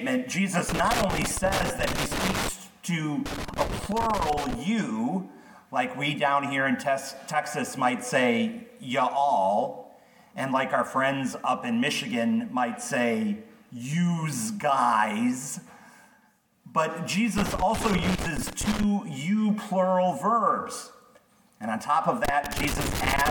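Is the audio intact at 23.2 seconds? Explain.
No. At 23.2 seconds the audio is inside a burst of loose connector crackle that runs from 22.25 s to 23.3 s, the very end of the clip. A worn or dirty contact keeps making and breaking as it shifts, so the signal is chopped on and off at random and any DC on the line turns each break into a pop. The result is an irregular scratching crackle. That irregularity sets it apart from digital clicks or buffer dropouts, which tend to be sharp, evenly spaced ticks or clean gaps.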